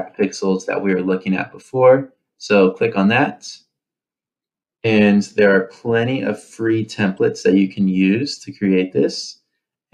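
At 7.17 s a corrupt frame was decoded: damaged bits in a few compressed frames were played anyway, and misread gains and codes scattered energy to the wrong frequencies. It sounds like a faint blip, peaking around -40 dBFS, and shows on a spectrogram as a brief, broad vertical smear.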